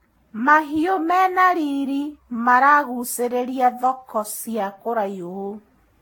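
From start to finish the speech has a swirly, hollow, smeared quality, with consonant onsets blurred and nothing above about 17.3 kHz. That is more damage than one pass at this rate would cause, which points to generation loss: likely around ten rounds of Vorbis decoding and re-encoding near 64 kbit/s. Each pass requantised the audio on a shifted frame grid, so noise and spectral holes piled up.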